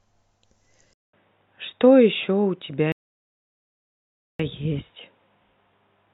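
At 0.93 s the speech drops out for 200 ms. It returns duller and boxier, with nothing above 3.8 kHz. A faint new background noise sits far below the speech. The level stays much the same. This is likely an input switched to a poorer device, with a narrower band.

From 2.92 to 4.39 s there is a rebuffering stall. The player ran out of downloaded audio and waited. The speech goes silent for 1.47 s, then resumes exactly where it stopped. Nothing is lost, but that time is added.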